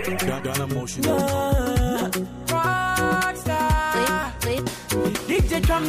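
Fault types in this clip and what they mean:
No faults can be heard anywhere in this audio.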